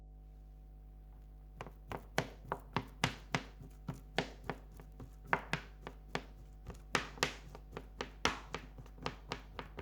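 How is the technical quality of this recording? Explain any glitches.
The recording suffers from mains hum running through its whole length. A ground loop or a nearby transformer has let the 50 Hz power line bleed into the signal path, so the electrical supply itself ends up recorded alongside the sound. The result is a steady low drone at 50 Hz, with some low harmonics above it, sitting only about 10 dB below the wanted sound. That is loud enough to stay audible under everything else from start to finish.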